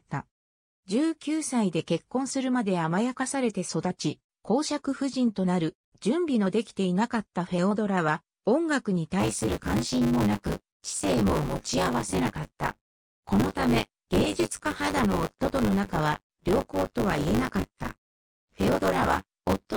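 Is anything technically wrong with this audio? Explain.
Yes. From 9.19 s to the end there's buffer tearing: the writer and the hardware reader of the ring buffer have slipped, so roughly a third of each 10 ms period replays audio from about 20 ms earlier. The hard joins give a steady 100 Hz robotic rattle whenever sound is present.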